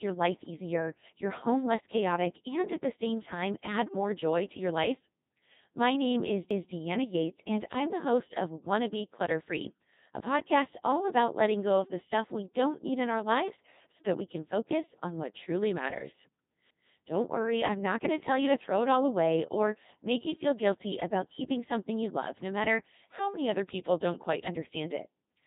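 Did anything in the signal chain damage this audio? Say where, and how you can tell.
Yes. At the codec stage, the whole clip has passed through the Codec 2 vocoder. The speech is robotic and buzzy with heavy damage, which fits a 2.4 kbit/s mode. A spectrogram shows nothing above 3.8 kHz and tidy synthetic harmonic stripes, because the decoder rebuilds sound from sine waves and discards the original waveform.

In the chunked processing or buffering stage, overlapping chunks cause a stutter at 6.51 s, just after "name is", and again at 16.71 s, after "on what truly matters". At each join, 200 ms plays twice because every 10 s chunk starts before the previous one ends. The waveform shows a duplicated segment with a hard discontinuity at each seam.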